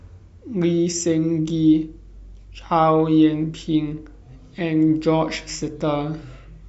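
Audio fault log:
No faults are audible anywhere in this speech recording.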